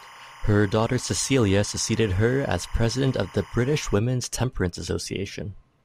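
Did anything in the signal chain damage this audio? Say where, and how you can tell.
Yes, timecode bleed in the analogue wiring. From the start of the speech to 3.95 s there is a steady chirping warble sitting roughly 20 dB below the signal, alternating between pitches around 1 kHz and 2 kHz. That two-tone switching is the signature of linear timecode: its biphase square wave switches rate with the value of each bit, and the pattern fits a 25 frames-per-second code. It is coupling in from an adjacent track or cable carrying that timecode, then cuts out.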